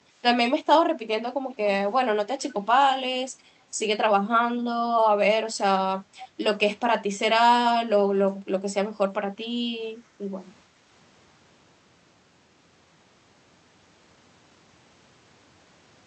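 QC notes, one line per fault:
2.41–2.54 s and 6.18–6.28 s, echo leak: a faint delayed copy of the speech pops up, trailing it by about 406 ms and sitting well down, roughly 20 to 25 dB below. It's likely a far-end loudspeaker whose echo canceller let some pickup slip back.
10.07–10.19 s, background gated by the echo canceller: the room tone briefly sags, dipping by about 6 dB for around a tenth of a second before recovering. That's the canceller ducking the microphone while the loudspeaker played, then letting go.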